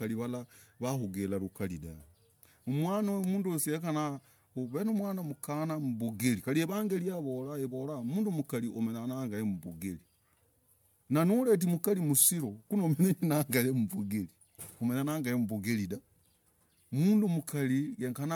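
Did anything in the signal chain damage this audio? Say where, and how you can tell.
Yes: generation loss throughout the clip, at the codec stage. The speech has a swirly, hollow, smeared texture and soft, blurred consonant attacks, worse than a single MP3 pass at the rate it points to, around 128 kbit/s, would leave. The band reaches about 20.1 kHz, so this is not just heavy lowpassing. The likely cause is repeated decoding and re-encoding, perhaps five times, each pass quantising on a shifted frame grid so noise and spectral holes accumulate.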